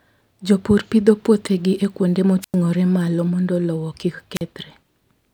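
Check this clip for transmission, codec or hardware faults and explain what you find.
Two wireless microphone squelch dropouts show up in this speech. The first runs from 2.41 to 2.55 s, just after "pidho puothegi e kuonde" and before "malo mondo lowo kik". The second runs from 4.34 to 4.42 s, right after "malo mondo lowo kik". Each time the FM radio link fades, hiss swells briefly, and the receiver's squelch mutes the output. That leaves a silent gap of about 97 ms in the first and 42 ms in the second.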